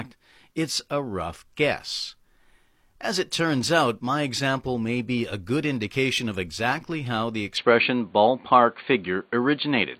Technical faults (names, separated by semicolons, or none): overlap between stream segments; input switched to a poorer device